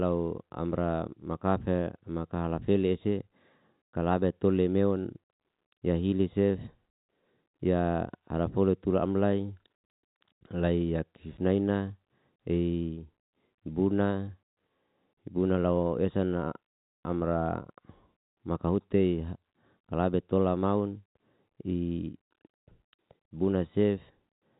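Nothing goes wrong anywhere in this speech, which just sounds like an ordinary G.711 telephone line with its narrow band that tops out around 3.8 kHz.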